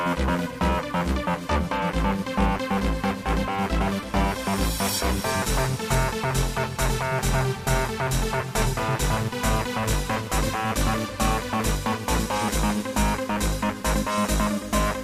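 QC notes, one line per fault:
Nothing stood out on listening.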